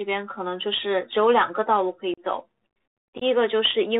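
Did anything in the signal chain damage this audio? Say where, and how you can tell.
Yes, at two stages. Throughout, the sound is dull and boxed-in, with nothing above about 4 kHz. Sibilants turn scratchy, loud bright moments break up, and a grainy hiss sits under the speech. That points to the Bluetooth CVSD headset codec, which fits a 64 kbps CVSD link. Each sample becomes a single up-or-down bit with an adapting step size. The band limit strips the top, and fast high-energy sound outruns the step.

The Bluetooth link itself also drops out twice, which is unconcealed Bluetooth headset packet loss. At 2.14 to 2.19 s there is a hole of about 37.5 ms with hard edges. At 3.18 to 3.23 s about 30 ms goes missing, broken up over 37.5 ms with the longest gap 18.8 ms, so it sounds chopped and crackly. Each time, the audio snaps back briefly quieter. Lost voice packets were replaced by silence or an idle pattern rather than filled in.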